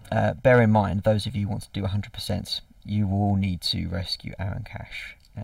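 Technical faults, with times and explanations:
Throughout, channel delay (comb filtering): one channel arrives roughly a millisecond and a half behind the other, and the two are combined into mono. Parts of the sound common to both channels cancel at evenly spaced frequencies, the first near 400 Hz and more at regular steps above it. These fixed notches never move. The result is a hollow, phasey colour on everything in the clip.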